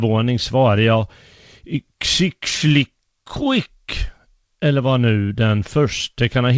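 No technical faults occur at any point in this speech, which comes through a working WebRTC call path with nothing above 8 kHz.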